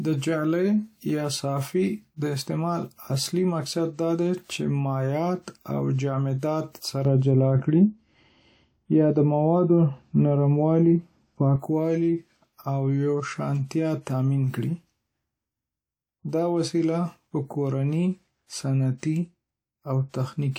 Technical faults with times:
6.39-6.43 pre-echo
7.05-11.56 de-emphasis applied wrongly
18.98-19.03 pre-echo

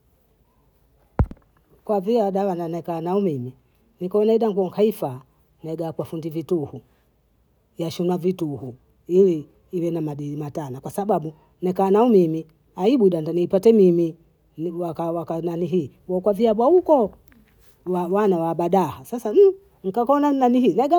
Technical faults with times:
none

